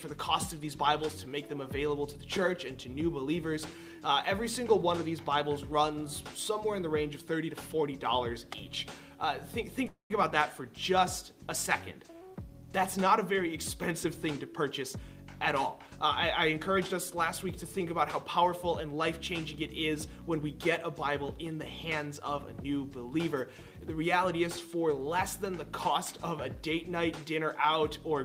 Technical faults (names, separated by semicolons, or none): call audio freeze; jitter buffer speed-up